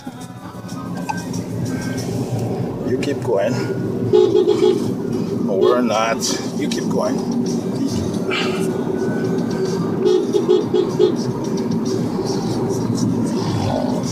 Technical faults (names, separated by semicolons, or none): none